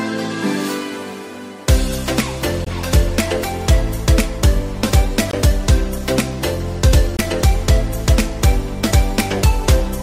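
At 2.65–2.67 s, 5.31–5.33 s and 7.17–7.19 s, a block of digital silence of about 21 ms, consistent with a 1024-sample buffer left unfilled, cuts in abruptly, producing a short hole each time.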